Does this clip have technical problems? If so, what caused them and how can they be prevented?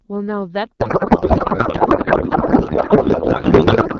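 Yes. From 0.80 s to the end, the speech turns into garbled noise and warble that barely follows it. This is a codec payload misread: the AMR-WB frames are decoded with their fields in the wrong places, which fits octet-aligned packing being read as bandwidth-efficient. Unlike packet loss, this is continuous rather than brief gaps. Prevent it by negotiating the same AMR payload format on both ends in the session setup.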